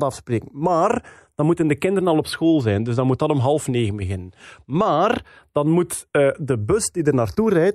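Throughout, a slow, sweeping flanging colours the speech when the two channels are summed to mono. The cause is channels drifting apart: clocks roughly 50 ppm apart let the inter-channel delay creep to about 0.2 ms, sliding comb notches through the spectrum.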